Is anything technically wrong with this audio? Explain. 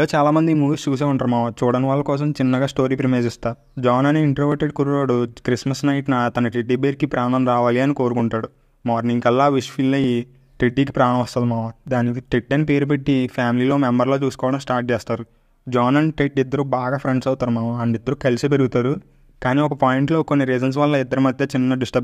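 Yes. From 0.84 s to 21.07 s there's a regular click every 1.84 s, about ten in all. Those are clock drift buffer slips: two devices likely on separate clocks, off by several hundred ppm, so the buffer drops or repeats a few dozen samples.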